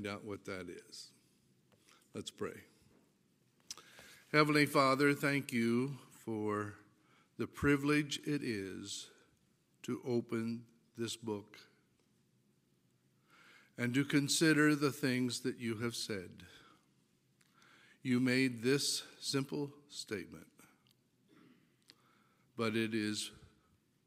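No technical fault can be heard anywhere in the audio. Nothing in it calls for a time, a cause or a repair.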